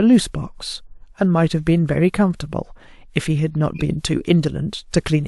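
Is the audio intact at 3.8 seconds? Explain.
No. A corrupt frame was decoded from 3.75 to 3.82 s: flipped bits in a couple of compressed frames were played anyway, so misread gains and codes put energy at the wrong frequencies, heard as a short chirp, squeak, blip or burst of noise near -15 dBFS.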